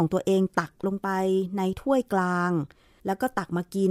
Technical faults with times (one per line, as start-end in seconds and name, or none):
none